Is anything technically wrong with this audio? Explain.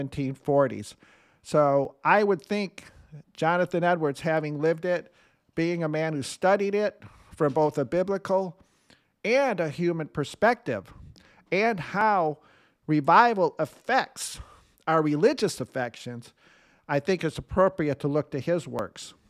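Yes. From about 1.85 s to 18.79 s the speech carries a regular click roughly every 3.39 s, about seven in all. This is clock drift buffer slips, likely caused by two devices running on independent clocks that differ by roughly 700 ppm. The buffer between them drifts until it must drop or repeat a block of around 150 samples, and each correction lands as a short tick in the signal.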